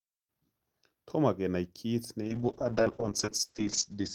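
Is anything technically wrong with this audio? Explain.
Yes. From 2.23 s, right after "kenai kiit", to the end, there's a call bitrate drop: the bandwidth estimate fell and the encoder coarsened, consistent with roughly 32 kbps down to 7 kbps, cutting the top from 20 kHz to 8 kHz. Speech turns muffled and rough, worst for about 1.36 s.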